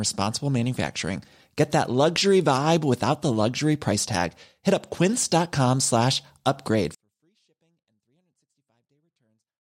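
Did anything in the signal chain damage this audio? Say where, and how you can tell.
Yes. A 24-bit alignment error (too quiet), a sample-format conversion fault, starts at 6.95 s, after "slash upgrade". 24-bit samples sitting in the low bytes of 32-bit words were read as full 32-bit values, so the speech stays clean but drops about 48 dB until the end.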